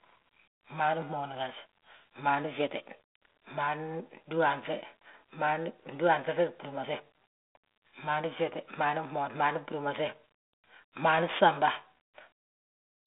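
No technical faults can be heard anywhere in this speech. The telephone path is audible as a band running from about 300 Hz to 3.6 kHz, with the light coding texture expected of G.726 ADPCM at 32 kbit/s.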